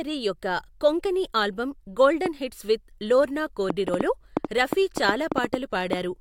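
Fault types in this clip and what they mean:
Train of clicks: from 2.26 to 5.94 s, after "యొక్క కొంకణి ఆల్బమ్", around fifteen alike pulses tick unevenly at about 3.8 per second, peaking about 15 dB over the speech. Unlike dense crackle, each click stands apart, likely from interference or a faulty connection.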